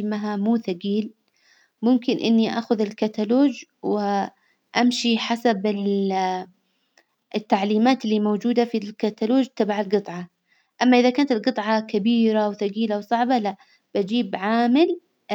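A speech recording, and nothing is technically wrong with it.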